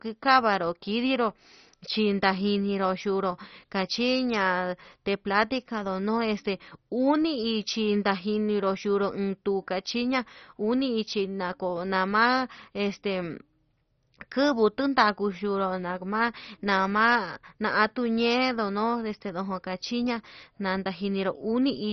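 From start to finish the speech is dull, with nothing above 6.1 kHz, and carries a gurgling, granular roughness as upper sub-bands flicker in and out. This is likely MP2 compression at a very low bitrate, around 32 kbps. Unlike a plain low-pass filter, it also adds coarse quantisation grit.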